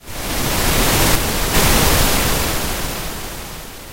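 From 1.15 to 1.54 s the sound drops abruptly by about 6 dB, then returns at full level. This is most likely one channel dropping out: with one stereo side lost, the mono sum keeps only half the shared content, and anything unique to that side vanishes.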